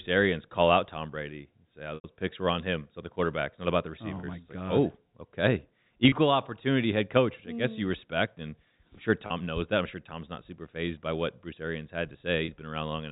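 Speech with packet loss with pitch repetition: between "and say" and "picks were on him" (1.95–2.04 s), 90 ms of lost audio is filled by a repeated pitch period that buzzes and fades, with 30 ms patches at 4.20, 6.09, 9.27 and 12.45 s. Spectrograms show frozen, flat harmonics; waveforms show identical repeating cycles.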